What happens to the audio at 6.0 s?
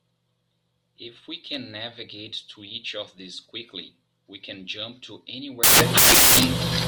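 At 6.0 s the speech is inside a stretch of samples built from the wrong bytes, running from 5.63 s to the end. The bytes of each sample are combined misaligned or in swapped order, so the noisy low bits dominate and the audio turns into loud, harsh broadband noise.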